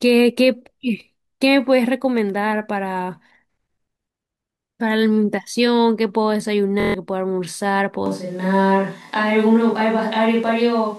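A system hang loop runs from 6.80 to 6.94 s. Playback stalled while the sound hardware kept cycling one ring buffer, so a single 23.2 ms slice of speech repeats exactly six times. At a loop rate of 43.1 Hz this comes across as a brief, steady buzz rather than a stutter, and the slice length fits a 1024-sample buffer. Around 150 ms of the real audio is lost behind it.

A switch to a distant microphone occurs abruptly at 8.06 s and lasts to the end of the clip. The speech suddenly turns roomy and hollow, with thinner low end, and a layer of room noise sits roughly 35 dB below the voice. The overall level stays about the same across the change. The likely cause is that the close microphone's feed dropped out and a farther pickup, such as a camera microphone, took over.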